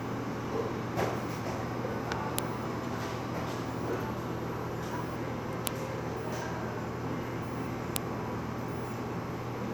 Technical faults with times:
2.38 file header played as audio
5.67 file header played as audio
7.96 file header played as audio

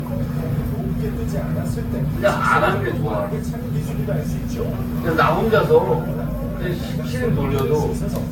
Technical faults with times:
0.00-8.31 generation loss

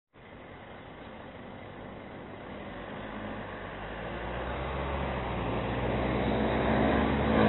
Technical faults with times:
0.00-7.48 AAC compression

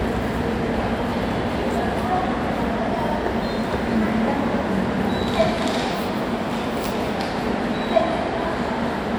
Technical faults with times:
none

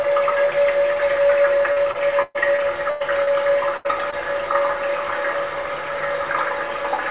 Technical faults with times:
1.72-3.29 repeated packet loss (robotic sound)
3.77-3.87 burst of packet loss
4.11-4.14 short concealed packet loss

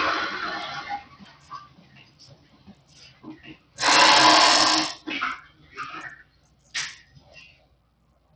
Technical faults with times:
0.00-8.35 noise suppressor applied to music or sounds
0.00-8.35 Bluetooth SBC compression
0.00-4.42 doubled audio track
1.04-3.23 sound cut by the noise suppressor
3.57-3.77 sound cut by the noise suppressor
5.49-5.72 sound cut by the noise suppressor
6.24-6.73 sound cut by the noise suppressor
7.06-7.22 sound cut by the noise suppressor
7.55-8.35 sound cut by the noise suppressor

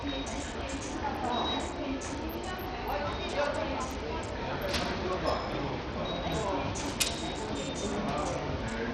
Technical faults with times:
0.00-8.94 Bluetooth SBC compression

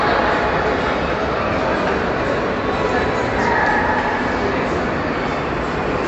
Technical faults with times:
0.00-6.08 MP3 compression

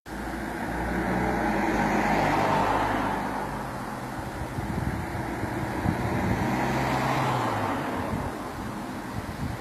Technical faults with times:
0.00-9.61 low bit depth without dither
0.00-9.61 HE-AAC compression

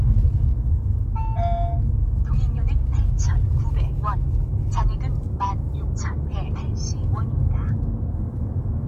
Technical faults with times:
none

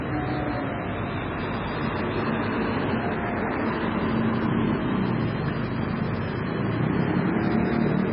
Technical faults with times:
0.00-8.12 MP3 compression

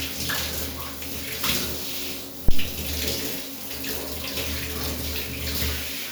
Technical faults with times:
2.49-2.70 phantom power thump

